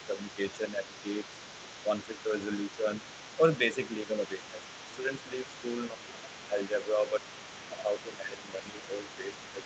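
Other side's voice leaking through runs from 0.0 s to the end: a faint second voice, roughly 15 dB under the speech, sits underneath throughout, most likely loudspeaker echo the canceller left in the microphone signal. Speech suppressed in double talk follows at 0.07–1.26 s, 1.84–2.87 s and from 3.37 s to the end. The voice dips by a few dB in the first two stretches and by about 10 dB in the last, likely because the echo canceller turned down both voices while both sides talked at once. Everything sits within the call path's 8 kHz band.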